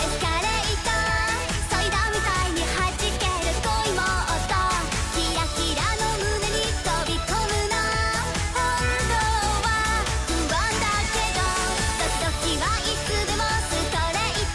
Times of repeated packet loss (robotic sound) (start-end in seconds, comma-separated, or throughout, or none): none